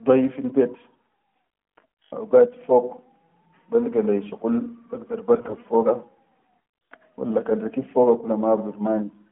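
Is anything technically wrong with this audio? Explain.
Yes. From 5.34 to 5.63 s, AMR bit errors: corrupted codec bits, around 7 percent, misplace the excitation pulses, so pitch and level hold while the sound turns hoarse and gargly, not dropping out as lost frames would.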